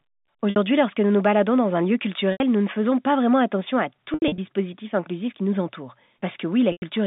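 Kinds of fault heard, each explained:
Packet loss with pitch repetition: at 0.5, 2.32, 4.14 and 6.72 s the speech briefly locks into a held, buzzy tone that fades away before the talker resumes through a soft cross-fade. Gaps of 60, 80 and 100 ms were filled by repeating the last pitch period. Near 4.14 s about 140 ms went missing in scattered bursts across 240 ms, the longest 80 ms. The gap lengths fit 20 ms packets.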